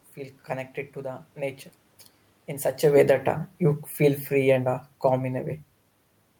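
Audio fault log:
2.82–5.57 s, automatic gain falling: after "in such" the speech and the room noise sink together by about 5 dB. The gain control judged the input too loud or its background noise too strong and slowly lowered its gain. The talker's own movement near 2.5 s is separate.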